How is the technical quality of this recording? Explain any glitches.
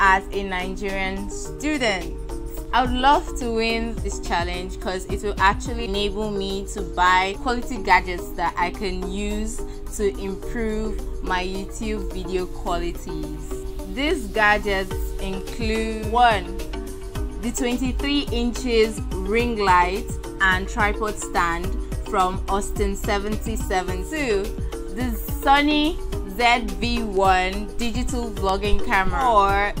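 No glitches can be heard anywhere in the recording. Nothing in the audio needs explaining.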